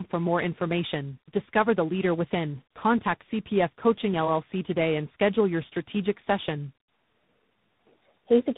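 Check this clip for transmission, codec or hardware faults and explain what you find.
One fault runs through the whole clip: tandem speech coding. The speech passes through about three narrowband coders in series, each re-coding the last one's damage. It sounds rough, muffled and warbly, with nothing above 3.8 kHz.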